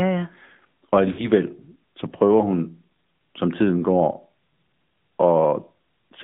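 Throughout, the speech carries AMR narrowband mobile codec damage: a band limited to about 150 Hz to 3.6 kHz and a clearly buzzy, synthetic texture, consistent with a mid-rate mode near 10.2 kbps. From 1.12 to 1.29 s there are lost AMR speech frames. The decoder stretches the last good pitch and vocal-tract settings at falling gain, so the sound smears and fades, which fits about 60 ms of missing frames.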